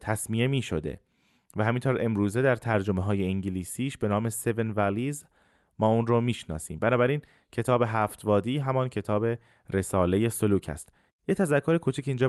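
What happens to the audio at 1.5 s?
Nothing goes wrong at 1.5 s: the speech passes through intact, carried normally by the call path with its usual coding character.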